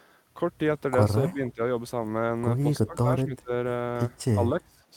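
From 1.21 to 1.6 s, the echo canceller likely mistook both sides talking at once for echo and turned the speech down, so the voice dips by roughly 15 dB in short pieces. This is speech suppressed in double talk. Inside it, at 1.27 to 1.33 s, comes an echo leak: loudspeaker pickup the canceller likely failed to remove was sent back, a faint copy about 30 dB down and 253 ms late. The same suppression returns at 2.85 to 3.08, 3.24 to 3.51 and 4.64 to 4.83 s, with dips of about 20 to 25 dB.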